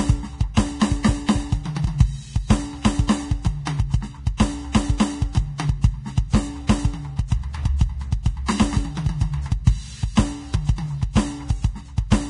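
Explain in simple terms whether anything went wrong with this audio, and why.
The whole music clip sounds dull, with nothing above 10.6 kHz. The treble is hissy and grainy. Tones sound rough and attacks blur. The likely cause is Vorbis compression, squeezing the file so hard that fine detail turned into noise.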